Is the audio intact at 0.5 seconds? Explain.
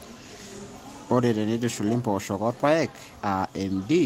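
Yes, the audio at 0.5 seconds is intact, with no dropout, click, distortion or other fault audible at that moment.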